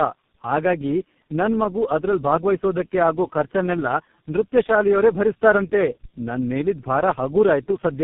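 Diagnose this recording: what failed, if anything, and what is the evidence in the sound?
The speech is rough, muffled and warbly for the whole clip, with nothing above about 3.7 kHz, and the grit is heavier than any single low-rate coder leaves. This points to tandem speech coding in the codec stage: the call seems to have passed through three speech codecs in a row, consistent with iLBC, then GSM full rate, and finally G.723.1, with G.711 links between them. Each border decoded the speech and encoded it again, so every coder worked on the previous one's damage and the errors stacked.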